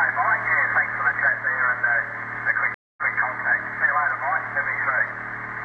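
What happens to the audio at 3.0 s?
A stream reconnect runs from 2.74 to 3.16 s. The connection drops and the sound cuts to about 0.23 s of silence. A fresh decoder then restarts mid-stream. The audio resumes about 0.19 s earlier, repeating a short stretch already heard.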